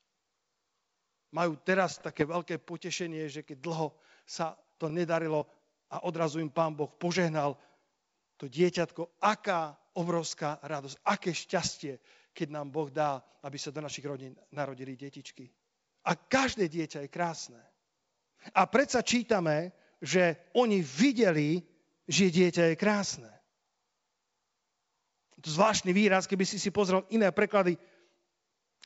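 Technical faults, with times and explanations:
1.93–2.25 s, bit errors on an ADPCM link: for about a third of a second, around half a percent of bits flip on the G.722 path, heard as scattered pops and rough, gritty bursts with brief jumps in level. Each flipped bit misleads the decoder's step size and predictor, so the damage rings on for milliseconds after the error rather than clicking once and stopping. That smeared tail separates it from simple packet-loss dropouts, and the span points to roughly 16 hit frames.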